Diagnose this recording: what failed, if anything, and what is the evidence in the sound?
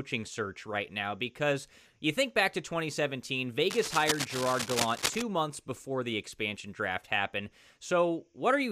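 Cable scratch noise from 3.7 to 5.22 s, ending just before "months before the expansion": rough, uneven rustling only slightly below the speech, likely a worn connector shifting in the analogue wiring.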